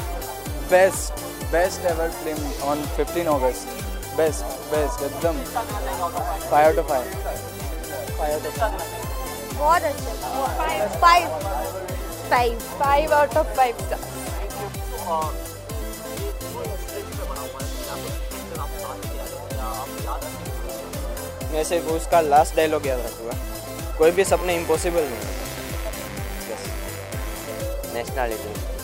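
A raspy mains buzz comes in at 24.01 s and hangs on until 27.62 s, sitting about 15 dB below the sound. It's 50 Hz based, with sharp spikes twice per cycle spraying harmonics up into the kilohertz range, the classic sign of a dimmer, rectifier or unshielded cable.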